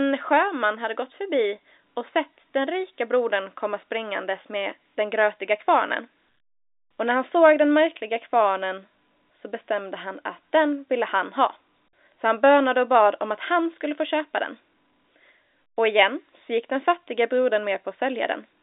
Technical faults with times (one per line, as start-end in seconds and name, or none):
none